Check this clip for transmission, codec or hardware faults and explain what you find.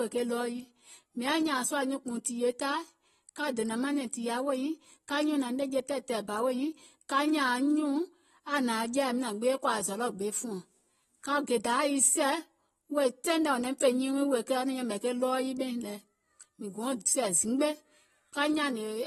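One codec fault runs through the whole recording. Throughout, likely AAC compression: nothing above 12.5 kHz, and fizzy, warbling sibilants fitting about 32 kbps, unlike a simple low-pass filter's clean dulling.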